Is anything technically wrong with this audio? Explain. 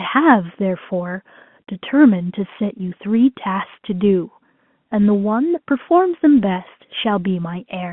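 No, nothing's wrong here: it's just speech coming over an ordinary G.711 telephone line, so you get that familiar narrow phone band of roughly 150 Hz to 3.4 kHz, which is simply how that line sounds.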